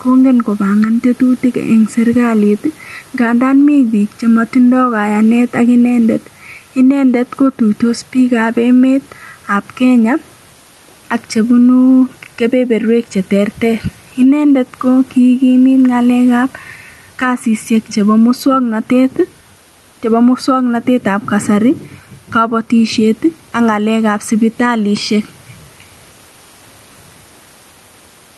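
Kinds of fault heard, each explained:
Gain pumping: throughout, the gain swings by around 10 dB, squashing loud and soft parts together, likely from a fast limiter reacting to excessive gain. Waveforms show a flattened envelope.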